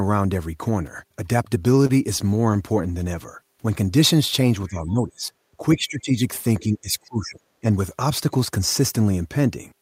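Between 1.63 and 2.57 s, packets arrived too slowly, and the jitter buffer ran dry six times, causing repeated stalls (stutter). The receiver stretched the last sound through each gap, about 78 ms in all and none longer than 23 ms, so the speech drags and catches.

Later, the echo canceller likely mistook overlapping talk for echo, and speech was suppressed in double talk at 4.68 to 5.32 s, 5.75 to 6.15 s, 6.59 to 7.38 s and 7.61 to 7.65 s. The voice dips by about 10 dB in the first and last, and by about 20 dB in the middle two.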